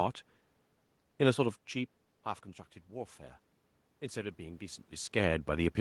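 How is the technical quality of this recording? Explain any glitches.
There's one real glitch here, near the end. From 3.99 s to the end at 5.80 s you can hear automatic gain rising: the input level dropped by about 15 dB, so the gain control decided things were too quiet and started cranking itself up bit by bit. Because it boosts everything, the voice and the room noise swell together over that last stretch, rather than the voice alone getting louder as it does when the talker shifts around, which happens near 1.5 s and 4.5 s.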